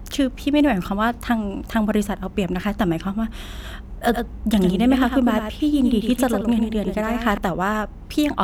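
A doubled audio track runs from 4.09 s to 7.37 s in this speech recording: a second, somewhat quieter copy of the full-band signal trails the original by roughly a tenth of a second, giving a clipped slapback with no reverberant tail or room colouring. It switches on and off abruptly at those edges. The likely cause is the same signal reaching the mix twice, once through a slower capture or routing path.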